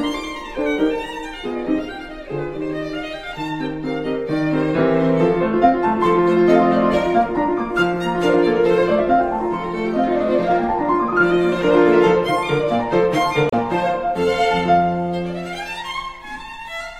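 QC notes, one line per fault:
13.49–13.55 s, damaged data in a compressed stream: a brief glitch as the decoder loses frame sync and resyncs at the next header.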